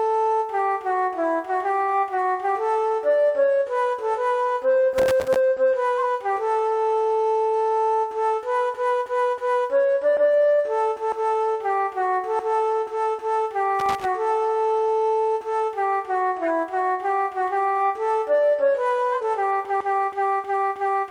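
At 4.98 to 5.36 s, and again at 13.79 to 14.05 s, there is loose connector crackle. A worn contact keeps cutting the signal in and out, giving a ragged, scratchy burst. Its irregular, uneven texture and length set it apart from the short, clean-edged decoder faults.

From 5.98 to 6.05 s a corrupt frame was decoded. Damaged data in roughly two frames was played as if valid, so energy landed at the wrong frequencies. The error peaks at about −15 dBFS. At 16.43 to 16.47 s a single frame does the same, reaching about −20 dBFS. Unlike crackle, each fault is compact, lasting about one or two frames.

Between 19.11 and 19.21 s, compressed frames were skipped. Around 50 ms of audio is missing and the sound jumps ahead. This fault removes material instead of adding foreign noise.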